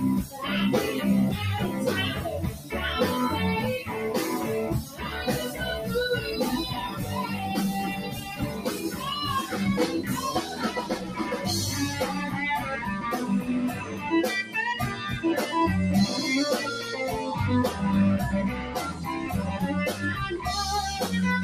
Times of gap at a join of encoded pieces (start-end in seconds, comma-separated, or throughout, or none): none